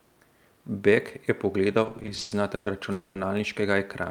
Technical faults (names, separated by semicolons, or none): repeated stalls (stutter); call audio freeze